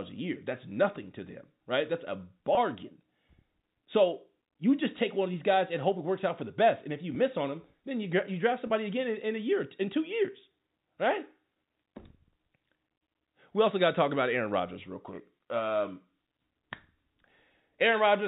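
Packet loss with pitch repetition occurs three times. At 2.55 to 2.57 s, about 20 ms of audio is missing. At 7.15 s, after "if you" and before "on them then", about 10 ms is missing. At 8.67 to 8.70 s, after "you draft" and before "again in in a", about 30 ms is missing. These gap sizes fit 10 ms packets. Each time, the receiver repeats the last pitch cycle to fill the hole, so the sound briefly holds with a faint buzz. The telephone-band G.711 coding underneath adds only faint damage.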